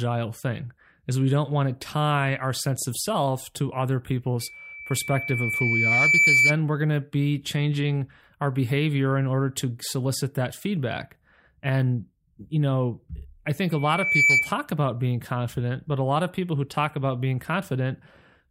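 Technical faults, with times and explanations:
4.39–6.58 s, loudspeaker feedback squeal: the microphone is picking up the loudspeaker it feeds, and at 2.3 kHz the loop gain passes one, so that frequency reinforces itself on every trip around the loop. A single tone swells over about two seconds to roughly 10 dB above the speech.
13.71–14.55 s, loudspeaker feedback squeal: the same 2.3 kHz loop runs away again, this time reaching a similarly loud squeal within about half a second.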